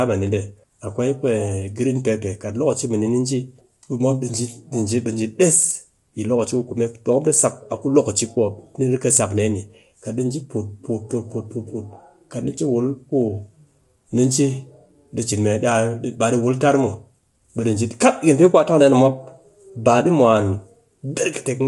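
Across the whole speech clip the sound is rough and grainy, with noise filling the gaps between harmonics and nothing above 11.6 kHz. That is low-delay AAC compression, likely AAC-ELD at a rate that fits around 32 kbps. Its short frames smear pitch detail, which sets it apart from the warbly, swirling artefacts of longer-frame codecs.

From 0.12 s to 21.66 s, clock slip clicks form a fast, soft rattle, one single-sample slip roughly every 20 ms. The even spacing points to two unsynchronised clocks differing by about 1000 ppm. Random crackle or packet dropouts would arrive irregularly and leave gaps instead.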